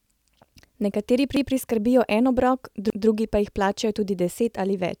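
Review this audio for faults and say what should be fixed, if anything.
Two repeated buffers occur. At 1.37 s, a 0.17 s stretch of speech plays twice, with a hard join where the repeat begins. At 2.90 s, between "en obrok" and "drugi pa jih", the same stutter returns. In both cases new audio arrived late, so the device replayed its last buffer. That length fits an 8192-sample buffer. No audio seems lost afterwards. Keep the playback buffer filled well ahead so late data never forces a replay.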